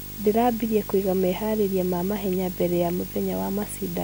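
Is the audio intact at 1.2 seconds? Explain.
No. Video or display buzz runs throughout, including 1.2 s: display interference couples into the speech, adding a 50 Hz buzz with hash and a 15.6 kHz line tone, roughly 10 dB below the speech.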